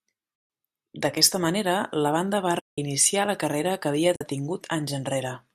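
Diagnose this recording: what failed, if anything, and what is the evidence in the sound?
Codec-side AAC frame loss with muting: soft-edged silent holes at 0.36–0.50 s, 2.60–2.78 s (after "manera la banda va") and 4.16–4.21 s, faded out and in.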